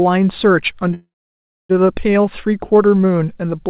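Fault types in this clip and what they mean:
Call audio freeze: from 0.94 to 1.71 s the speech stops advancing. The last sound is drawn out into a short fading buzz or hiss, then about 0.63 s of near silence, before the talk resumes exactly where it left off. The likely cause is a jitter buffer running dry while packets were held up, so about 0.75 s was inserted rather than lost, and everything afterward arrives that much later, within the 4 kHz band of the G.711 mu-law call path.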